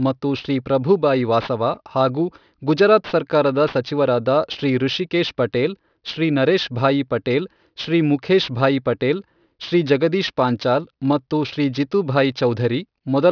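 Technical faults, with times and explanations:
Throughout: aliasing. The speech's sample rate was reduced without an anti-aliasing filter. Content above the new half-rate at 5.5 kHz reflects back below it as tones with no harmonic relation to the original, at around 20 dB under the speech itself. Sibilants and fricatives take on a gritty, metallic edge, and the spectrum stays dense right up to 5.5 kHz, which points to a drop from 44.1 kHz to roughly 11 kHz.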